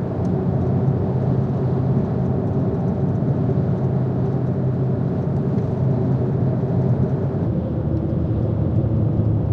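A section at the wrong speed runs from 7.47 s to the end of the clip at 9.52 s. At that point the audio abruptly drops to 0.843 times its proper rate, so everything after 7.47 s is both slowed and pitched down by roughly three semitones at the same moment. The sounds turn heavier and more drawn out than what precedes them. The likely cause is playback or editing that fitted this stretch to the wrong clock.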